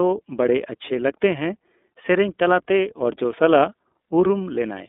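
Throughout the speech, the iLBC codec is at work. The band is confined to roughly 250 Hz to 3.6 kHz, so the top end is gone and the low end is thin. The codec damage is plainly audible. Each short block of sound is coded separately, which fits 30 ms frames and a 13.33 kbps mode. Without carry-over between frames, the speech takes on a rough, buzzy, slightly synthetic texture.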